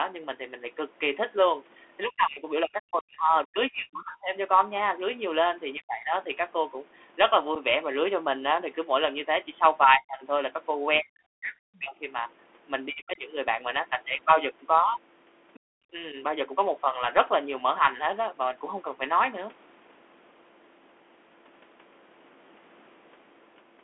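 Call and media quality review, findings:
Bluetooth CVSD headset codec, whole clip: band-limited to roughly 250 Hz to 3.4 kHz, with granular hiss and scratchy sibilants. The spectrogram is empty above 3.4 kHz. The sound fits a 64 kbps CVSD link.

Speech suppressed in double talk at 2.04–4.34 s, 5.76–6.14 s, 9.84–11.95 s, 12.89–13.21 s and 15.92–16.16 s. The waveform envelope collapses by up to about 40 dB, and only about 5 dB at 16 s. The likely cause is the echo canceller ducking the talker while the far end speaks.

Unconcealed Bluetooth headset packet loss at 7.55 s: a 7.5 ms hole with hard edges. The waveform shows a flat gap, and the spectrogram shows a thin vertical line. This fits two lost headset packets.

Other side's voice leaking through at 11.76–11.81 s and 15.54–15.60 s: brief scraps about 25 dB below the speech. They show as faint bursts on the spectrogram. This is likely residual loudspeaker echo that the canceller missed.

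Background gated by the echo canceller at 15.60–15.84 s: the room noise drops about 32 dB right after the leak. The spectrogram shows a dark notch across the noise floor, which recovers when the canceller releases.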